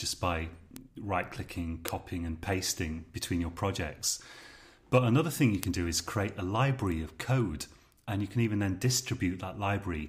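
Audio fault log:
0.76 s, 1.88 s, 5.63 s, 6.92 s: bit error spike. Each is a single hard tick with no pitch or tail, unrelated to the surrounding sound. The loudest two, at 1.88 s and 5.63 s, peak near about -4 dBFS; the others are softer, about -16 dBFS and about -22 dBFS. Each is one corrupted sample whose value jumped by a power of two and snapped straight back. That lone discontinuity spreads energy across the whole spectrum, so it sounds like a broadband click.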